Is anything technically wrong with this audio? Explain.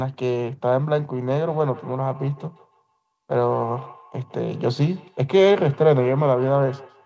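Yes, there's a feedback echo between two devices. From 1.14 s to the end, each word comes back roughly every 150 ms, at about 21 dB below the speech, thinner and ringier each pass. One device's loudspeaker is feeding another device's microphone, and neither echo canceller catches sound it didn't play itself. The missing content above 8 kHz fits a wideband call codec.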